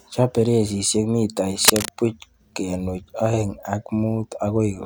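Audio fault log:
1.65–1.89 s, cable scratch noise: dense, irregular scratching bursts sit a few dB above the speech, likely from a worn cable or connector shifting so its contact resistance fluctuates rapidly.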